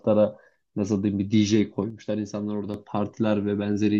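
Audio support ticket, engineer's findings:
Speech level drops abruptly by about 6 dB from 1.90 s to 2.74 s, then recovers. Likely cause: one channel drops out upstream of a mono fold-down. The shared content loses half its contribution, and anything present only in the missing channel is gone. Check stereo cabling, connectors and channel routing.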